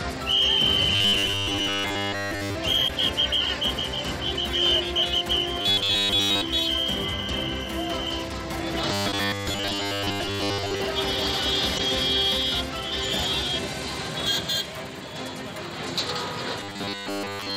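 From 0.95 to 2.55 s the sound turns into robotic sound from repeated short buffers, a rigid metallic buzz at 100 Hz. This likely comes from the playback repeating a 10 ms slice of audio while most of the real signal is skipped. The same buzz returns from 5.61 to 6.41 s, from 8.92 to 10.83 s, and from 16.60 s to the end.

Damaged data in a compressed stream shows up as short disruptions at 2.85–2.90 s, 9.09–9.14 s (inside the third buzz) and 11.75–11.80 s. In each case the decoder hits corrupt frames, loses sync and jumps ahead to the next valid frame header.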